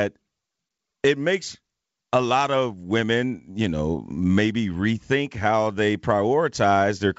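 No technical faults are audible.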